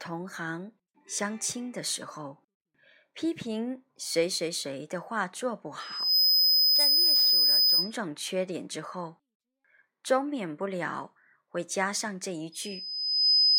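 A piercing 5 kHz tone swells out of the speech at 5.80 s, reaching about 10 dB above it within half a second and holding until 7.94 s, then returns more slowly at 12.52 s and runs to the end. This is loudspeaker feedback squeal: the microphone hears its own loudspeaker, and at 5 kHz the loop's gain tops one, so that frequency keeps building.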